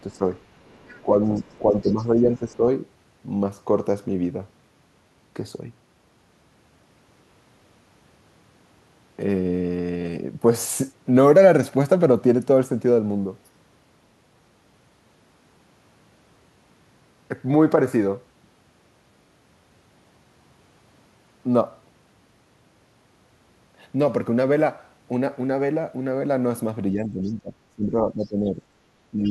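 Right at the start, from 0.07 to 0.23 s, the talker's speech dips by about 10 dB for a fraction of a second. This is speech suppressed in double talk: the echo canceller likely heard both sides at once and turned the talker down along with the echo. Beneath it, from 0.13 to 1.92 s, a faint second voice sits about 35 dB under the speech. That is the other side's voice leaking through, likely loudspeaker playback the canceller did not fully remove from the microphone.

From 0.87 to 2.62 s the talker is pulled down again, this time by about 15 dB, with roughly a second of the span audibly thinned or dropped. This is likely the same double-talk suppression. A brief scrap of the far voice surfaces at 2.52–2.56 s, again about 35 dB down, and is likely more leaked echo.

The ending repeats the pattern. From 26.93 s to the end at 29.31 s the speech sinks by about 10 dB across roughly a second and a half, likely double-talk suppression once more. 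Within that stretch, a short fragment of the other side's voice at 27.25–27.32 s, about 35 dB below the speech, is likely leaked echo. A final scrap at 29.24–29.31 s is slightly louder at about 30 dB down, and is likely also echo leaking through.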